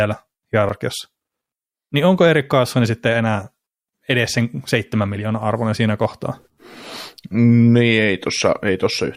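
At 0.69 s the speech has a tiny skip where the waveform jumps. This is an overlap between stream segments: two segments, apparently 6.0 s long, carried overlapping time stamps, and the player cut away a few milliseconds of sound that was never really doubled.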